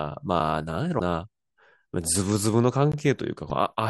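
At 0.40 s the speech drops into a block of digital silence about 5 ms long, and at 2.92 s there's another of about 17 ms. The sound cuts out and back with no fade, so you hear a tick at 0.40 s and a short pop-like hole at 2.92 s. That's likely the output buffer not getting filled in time. From 0.96 to 1.01 s and again from 3.46 to 3.52 s there's damaged data in the compressed stream. The decoder misreads those frames and has to find sync again, so each spot comes out as a brief blip.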